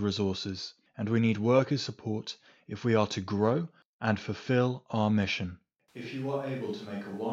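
The close microphone's feed likely dropped out at 5.88 s, leaving a distant microphone carrying the speech to the end. The voice abruptly turns roomy and hollow, thinner in the bass, roughly 5 dB quieter, with background noise about 30 dB below it.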